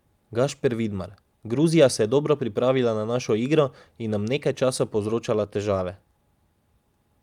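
Nothing in this speech recording stood out as a technical problem on listening.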